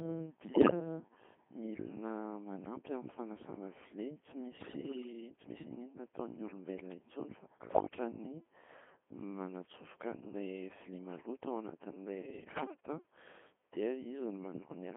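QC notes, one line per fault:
Throughout: Codec 2 vocoder. The speech is heavily damaged, robotic and buzzy. The band is narrow, about 200 Hz to 3.5 kHz. The buzz suggests a very low rate, which fits the 2.4 kbit/s mode. The decoder never receives the real waveform. It gets only pitch, voicing, level and a rough spectral shape for each short frame. It then rebuilds the voice from sine waves, so breath, texture and fine detail are lost.
0.52–0.80 s, 4.58–5.13 s, 7.62–7.96 s, 12.42–12.86 s: bit errors on digital voice radio. The synthetic voice breaks into warbles, bleeps and garbled robotic sound. Pitch, loudness and tone colour jump from moment to moment. The last burst comes just after "vilia maloto anatin’ilay". These bursts sound like corrupted bits reaching the decoder. The error rate is a few percent, and the first burst is worst at about one bit in ten. Each bad bit changes the settings for a whole frame, not one sample.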